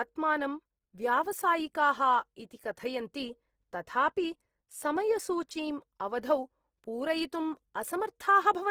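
From start to finish the speech has a grainy, rough texture, with the detail in the highs turned noisy rather than clean. That's likely Opus compression at a low rate, around 16 kbps, where missing bands get filled with noise instead of dropping out, though bandwidth still reaches about 20.3 kHz.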